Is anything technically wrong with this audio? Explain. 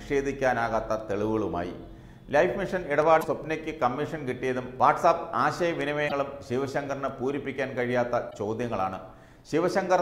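Yes, there are two kinds of fault in here.

First, a loud pop from 3.02 to 3.04 s: one sharp click sitting a few dB above the sound, which keeps going underneath it. It's short and hard-edged, so it's most likely an electrical transient, like a plug, a switch or a bit of static, that got added straight onto the signal and was rounded off a little by the circuitry after it.

Then there's damaged data in a compressed stream, three times: 3.18 to 3.25 s, 6.05 to 6.12 s, and 8.27 to 8.34 s. Each one is a brief glitch of about 70 ms. What's happening is that bytes in the encoded stream got corrupted, so the decoder can't read those frames, loses its place, and jumps ahead to the next frame header it can lock onto.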